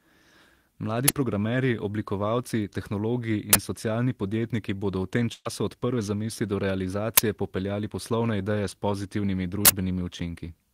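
At 1.08 s, a short, very loud burst of digital noise cuts in. It is an uninitialised buffer: a 10 ms block played before audio was written to it, so leftover memory came out as samples. The same harsh burst returns from 3.53 to 3.55 s, lasting 20 ms.

From 5.33 to 5.47 s, a burst of packet loss drops 120 ms. The receiver stretches the last sound for about 114 ms and fades it down. About 10 ms of silence follows, and the speech resumes further on.

Two more uninitialised buffer bursts follow: a 10 ms one at 7.17 s and a longer 40 ms one from 9.65 to 9.69 s.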